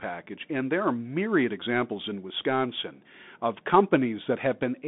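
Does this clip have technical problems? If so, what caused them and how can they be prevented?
Yes. The whole clip has gone through a Bluetooth CVSD headset codec. The band sits at roughly 150 Hz to 3.6 kHz with nothing above 3.8 kHz, which fits a 64 kbps CVSD link. CVSD sends one bit per sample saying up or down with an adapting step, so fast loud highs outrun it. The damage is plainly audible: a grainy hiss under the speech and roughened, scratchy sibilants. To prevent it, record locally or set the headset to a wideband or high-quality profile instead of the hands-free mode.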